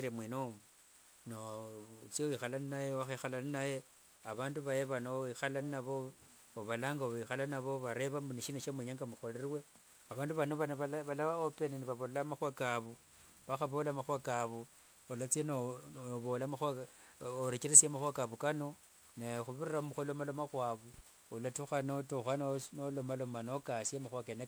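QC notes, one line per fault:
Throughout: generation loss, swirly hollow speech and smeared attacks from stacked requantisation, likely about five 128 kbit/s MP3 passes; spectrogram holes, nothing above 20.9 kHz.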